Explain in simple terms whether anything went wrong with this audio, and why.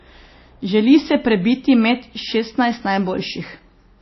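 Low-bitrate audio saved at a high bitrate, throughout the speech: nothing is heard above about 5.8 kHz, so it sounds muffled. It was likely first squeezed into a small MP3 and later resaved as a large one, which cannot bring back the lost detail.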